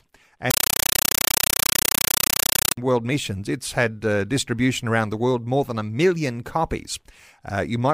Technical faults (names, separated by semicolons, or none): compressed stream played as audio